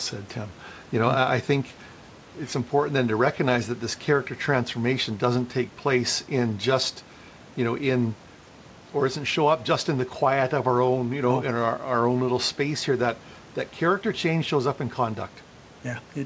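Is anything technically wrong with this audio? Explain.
No, nothing technically wrong stood out on listening to this speech clip.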